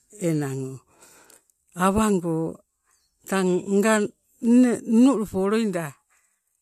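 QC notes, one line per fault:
Nothing to flag here, as no technical problems turn up anywhere in this recording.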